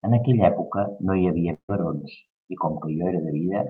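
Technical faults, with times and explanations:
1.53 to 1.70 s, burst of packet loss: Several packets in a row never arrived in time to be played. The receiver covered the gap by extending the last sound it had and fading it down. That concealment lasts about 150 ms and turns into a held buzz or hiss before it dies away, with about 80 ms of it effectively silent. Speech then picks up further along, with about 160 ms skipped.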